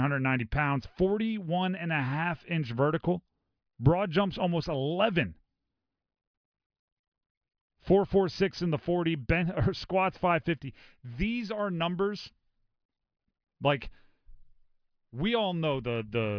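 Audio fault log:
No faults heard in this speech.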